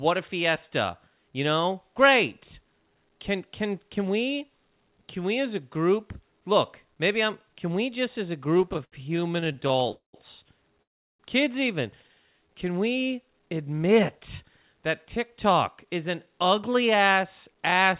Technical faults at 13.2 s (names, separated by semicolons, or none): none